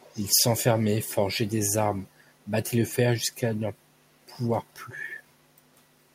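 From 0.0 to 0.26 s, a far-end echo canceller likely let some loudspeaker pickup through; this echo leak returns a faint copy of the speech about 406 ms late, well below the direct sound. From 5.43 to 5.52 s, the echo canceller briefly clamped the microphone, so the background dips by about 10 dB for roughly 70 ms before recovering.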